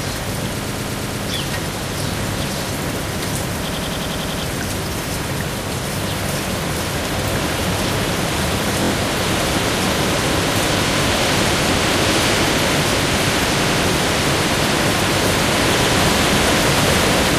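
Repeated frames make the sound stutter at 0.63–1.21 s, 3.67–4.41 s, 8.83–8.90 s, 13.63–13.82 s and 15.82–15.93 s. Each time, a block of compressed frames 23 to 116 ms long plays again one to eight times. Every repeat lengthens the audio.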